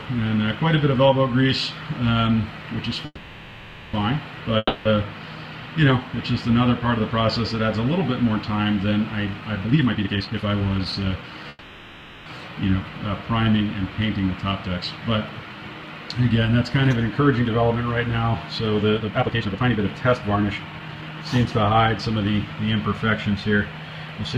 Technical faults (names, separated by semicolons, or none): call audio freeze; long network dropout; jitter buffer speed-up